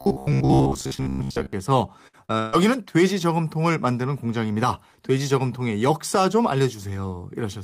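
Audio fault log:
0.02–1.53 s, robotic sound from repeated short buffers: This is likely a playback path starved of new audio, so the software kept re-sending its last short buffer while fresh material was skipped. For most of this stretch, the looping imposes a fixed buzz at about 66.8 Hz, which fits a buffer of roughly 15 ms. The speech becomes a stiff, metallic drone that only loosely tracks the original phrasing.
2.07–2.15 s and 2.39–2.55 s, burst of packet loss: Runs of packets arrived too late or not at all, leaving holes of 60 ms and then 140 ms. The receiver bridged each one by extending the last sound and fading it as the gap lengthened, covering 58 ms and 138 ms. Those spans are heard as a held, dwindling buzz or hiss rather than silence. When playback resumes, the material that fell inside each gap is gone.
2.25–2.31 s, short concealed packet loss: Between the two bursts, 40 ms of audio failed to reach the decoder in time. 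The receiver synthesised 36 ms of replacement from the preceding sound, continuing its pitch or shaped noise, then crossfaded back into the real signal. The result is a brief smear or wobble.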